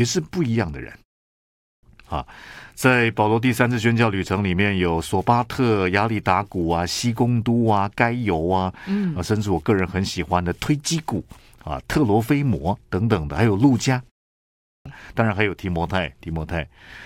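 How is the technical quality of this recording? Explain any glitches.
The recording has two glitches, both a clipped start after a pause. At 1.37 s, speech bursts abruptly out of silence with its opening sounds missing, about 0.46 s of audio gone until 1.83 s, following a 0.41 s pause. The same happens at 14.33 s, where roughly 0.53 s vanishes until 14.86 s after a 0.31 s pause. During those short gaps the output device dropped into a low-power idle state and needed time to wake and relock, so the first part of the resumed speech was swallowed. The pauses themselves fall quiet as expected.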